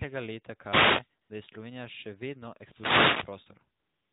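From 0.60 to 1.11 s a brief swish of static washes over the speech. This is a wireless microphone noise hit: the analogue FM radio link faded as reflected signals cancelled, so the receiver's own noise rose through the sound. From 1.22 to 1.30 s the background turns into a smooth, even hiss for about 80 ms. This is AMR comfort noise: the phone judged the talker silent and stopped sending speech frames, and the receiving end filled the gap with synthetic noise built from a rough description of the background. Right after "še vedno", from 2.53 to 3.49 s, a longer burst of static returns as the radio signal fades again. From 3.80 s to the end, the real background drops out once more and the same steady, artificial noise replaces it, against the narrowband, below-4 kHz sound of the mobile speech codec.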